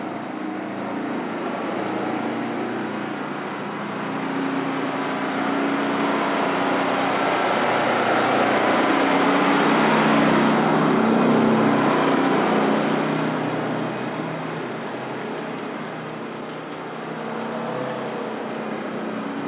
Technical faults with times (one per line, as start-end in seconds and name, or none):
none